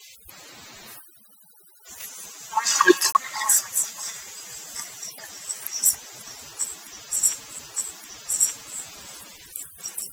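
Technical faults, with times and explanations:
throughout, overdone noise removal: the background drops and breaks up into twinkling specks, because noise reduction set too hard switches off bands near its noise estimate, taking quiet speech detail too.
3.12–3.15 s and 7.59 s, CD skip: a tick with a brief mute, then the speech carries on from a different point, because the laser jumped to another turn of the disc's spiral.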